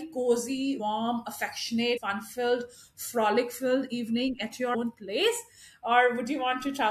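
The decoder dropped compressed frames at 0.79 s, 1.96 s and 4.74 s. Each time, about 150 ms of speech is lost, which fits a run of roughly seven 21 ms frames, and the speech jumps ahead at the join.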